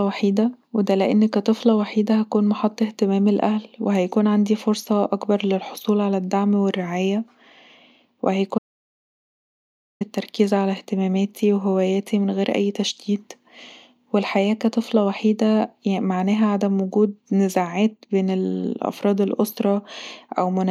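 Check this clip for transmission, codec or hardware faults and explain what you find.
One fault turns up, an audio dropout to silence. From 8.58 s to 10.01 s the speech cuts off into silence with no room tone, and about 1.42 s of speech is lost. The likely cause is the input signal being lost, through a disconnection, a failed link or a mute, while the recorder kept writing silence.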